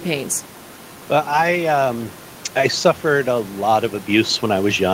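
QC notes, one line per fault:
Nothing to flag here, just some room noise sitting about 21 dB under the speech, which belongs to the recording space rather than the system.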